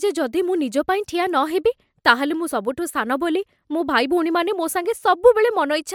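No technical faults are audible anywhere in the speech.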